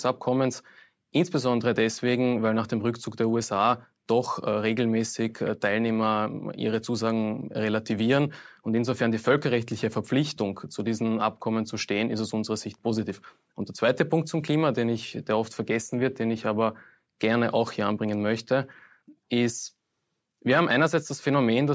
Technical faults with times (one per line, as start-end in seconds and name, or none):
none